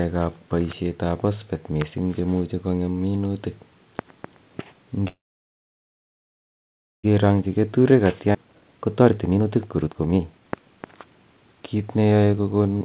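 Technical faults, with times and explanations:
5.08–7.06 s, call audio freeze: the sound stops, with only a brief trailing continuation before about 1.9 s of silence. Afterwards the speech resumes from where it halted, with nothing lost. This points to a likely stall in packet delivery that emptied the jitter buffer. Unlike a skip, it inserts a gap.
7.23–12.69 s, jitter buffer speed-up: the speech runs at about 125% of normal rate while pitch stays unchanged. Roughly 1.5 s of accumulated delay is trimmed by repeatedly cutting out pitch-period-sized slices. That is why it sounds hurried rather than chipmunk-like, and it differs from a resampling error.
8.32–8.36 s, skip ahead: within the hurried stretch, playback jumps forward with almost no gap. Roughly 0.7 s of speech is discarded and the two sides are butted together, dropping about half a second of delay. Unlike the freeze, material is lost rather than paused. 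Throughout, the narrowband sound with nothing above 4 kHz fits 64 kbps G.711 mu-law.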